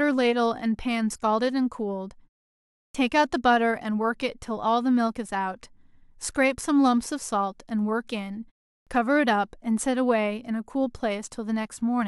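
The output device drops into sleep during quiet stretches and needs time to wake, producing a clipped start after a pause. At 2.87 s, after a 0.67 s pause, about 75 ms is lost; at 8.80 s, after 0.37 s, about 67 ms. Speech resumes abruptly, its opening sounds missing.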